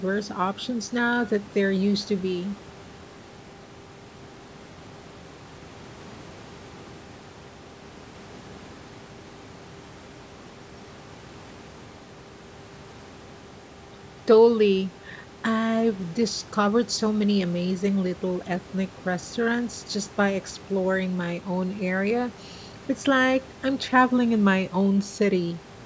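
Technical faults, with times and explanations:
No faults are audible in this speech; it has passed through call microphone processing, with nothing above 8 kHz and the lowest bass rolled off by the normal high-pass filter.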